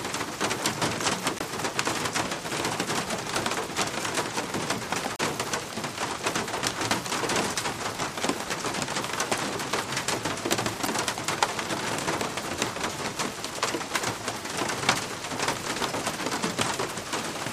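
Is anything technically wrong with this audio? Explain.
Yes. Damaged data in a compressed stream at 1.37–1.42 s, 5.16–5.20 s and 10.83–10.87 s: corrupted bytes make the decoder misread frames and lose sync, each time giving a brief glitch.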